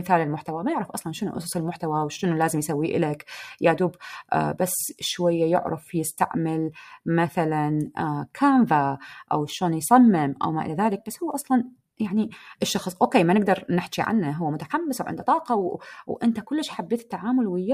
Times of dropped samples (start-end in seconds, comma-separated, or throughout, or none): 10.44